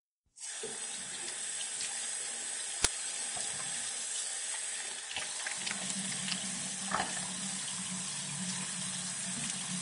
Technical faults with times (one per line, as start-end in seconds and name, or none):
0.00-9.81 Vorbis compression
2.84 uninitialised buffer